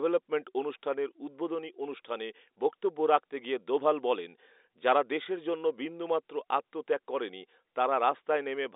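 Nothing is technically wrong with this speech clip, which comes through telephone-band coding.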